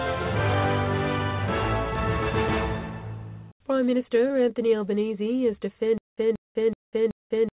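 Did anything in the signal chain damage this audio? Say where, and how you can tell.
Yes. Network stage: short concealed packet loss at 4.28 to 4.32 s. About 20 ms never arrived, and concealment filled 17 ms, heard as a brief smear. It shows as a smoothed patch under G.711's 4 kHz ceiling.

Playback or buffering stage: from 5.98 s to the end, a stutter with silent gaps. A 181 ms fragment repeats every 377 ms, with 196 ms of flat-line digital silence between. The waveform shows identical repeating blocks. This is likely a stalled stream.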